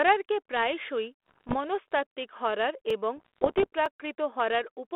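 Speech, carried over what sounds like a 32 kbit/s G.726 ADPCM telephone link limited to roughly 300 Hz to 3.5 kHz, is hit by bit errors on the ADPCM link from 1.26 to 1.55 s, just before "মনস্তাত্ত্বিক হরর এবং", and again from 3.17 to 3.67 s, just after "প্রায়শই মনস্তাত্ত্বিক হরর এবং". The first stretch has an error rate around one and a half percent, the second under one percent. Each flipped bit throws off the decoder's step size and prediction, so the damage rings on briefly. This produces pops, rough crackling bursts and momentary jumps in level, denser in the earlier stretch. Two blocks of digital silence also occur. At 2.90 s, right after "প্রায়শই মনস্তাত্ত্বিক হরর", about 2.7 ms of output drops to zero, which fits a 128-sample buffer that was not filled in time. At 3.86 s a 4 ms gap does the same. Each hard cut to silence and back, with no fade, is heard as a sharp tick.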